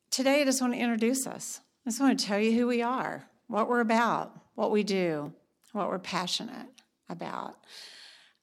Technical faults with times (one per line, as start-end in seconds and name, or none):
5.26 block of digital silence